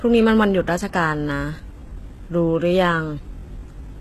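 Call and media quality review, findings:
Treble throughout present but synthetic, gritty and lispy on s sounds, nothing above 12.3 kHz. Likely HE-AAC compression at a low bitrate, around 16 kbps: spectral band replication copies lower bands upward, so the treble isn't truly lost but its harmonics misalign, unlike a plain low-pass.

From 1.01 s to the end, a time-stretched section: pace drops abruptly to about 0.71x while pitch holds, so the speech drags. Likely a stretch algorithm repeating short pieces to fill length. Unchanged pitch rules out slow playback or resampling.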